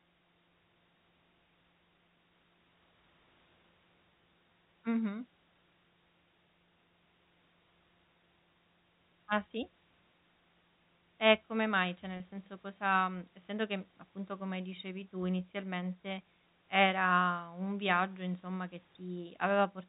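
Speech over a telephone-band channel, with nothing above 4 kHz, consistent with G.711 A-law coding at 64 kbps. Packet loss with pitch repetition occurs from 12.17 to 12.20 s, just before "senso cosa mhmm essendo". About 30 ms of audio is missing. The receiver fills the gap by repeating the last pitch period. The result is a brief held, buzzy tone. The gap length fits three lost 10 ms packets.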